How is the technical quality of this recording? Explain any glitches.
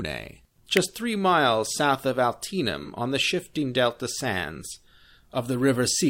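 Two brief glitches interrupt the speech.

At 0.77 s there is a sharp snap laid over the audio. This is an electrical switching spike, likely a nearby switch, motor or static discharge arcing and the audio line picking up the burst as an added click.

From 2.83 to 2.88 s there is a short smeared, noisy patch. This is AAC frame loss with concealment. About 43 ms of coded audio went missing, which fits one lost frame, and the decoder patched the gap by reusing the last good spectrum with randomised phase, leaving that blurred texture.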